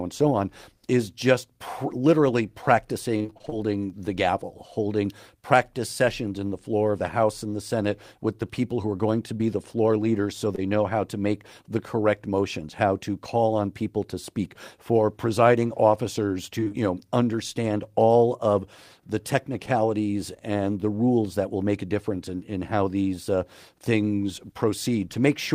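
From 3.17 to 3.54 s the speech turns choppy and machine-like. This is repeated packet loss (robotic sound): nine holes land within about a third of a second, each up to 28 ms long, and half of that stretch, some 180 ms, is patched by extending the preceding sound. The fills and dropouts follow each other so fast that the concealment never settles, producing the choppy, broken texture.

At 9.38 to 9.42 s and again at 10.56 to 10.60 s there is short concealed packet loss. In each spot about 20 ms never arrived, and the gap was filled by continuing the previous sound before blending back into the real signal. Each is a single brief smear or wobble rather than a run of breaks, which separates it from the robotic stretches.

From 16.60 to 16.76 s the robotic effect returns, more briefly: four gaps of up to 27 ms, with about 80 ms concealed, again half the span.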